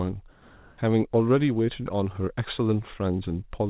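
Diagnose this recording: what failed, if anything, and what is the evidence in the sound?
From 0.32 to 0.78 s the real background gives way to a steady, featureless hiss, about 29 dB below the loud parts and shifting about 2 dB in level. This is comfort noise in place of the background, likely from discontinuous transmission in call processing, with the receiver synthesising noise for those 460 ms.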